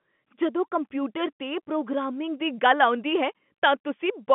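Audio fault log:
Nothing stood out on listening to this speech, heard over a telephone-band line whose content tops out around 3.7 kHz.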